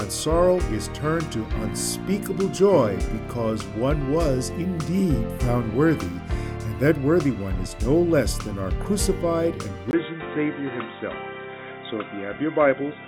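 At 9.91 s there's a tiny gap, then the sound goes dull to the end, nothing above 3.8 kHz, with a faint new hiss at the same level: likely an input switched to a poorer device.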